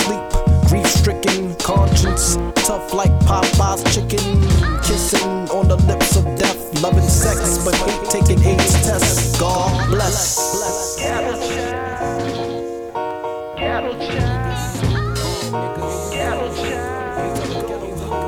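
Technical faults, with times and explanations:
7.23–13.11 s, doubled audio track: a second full-band copy of the sound runs roughly 150 ms behind the original, about 5 dB quieter, so every onset is followed by a distinct, slightly softer repeat. The copy has no decay tail or room colouring, which separates it from a natural echo, and it cuts in and out abruptly at both ends. The likely cause is the same signal reaching the mix twice, once through a slower path.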